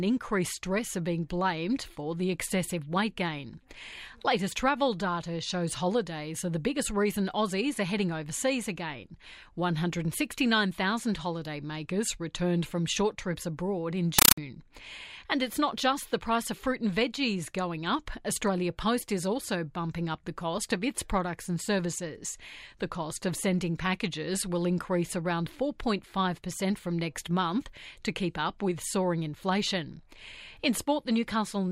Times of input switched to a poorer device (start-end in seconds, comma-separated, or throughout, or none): none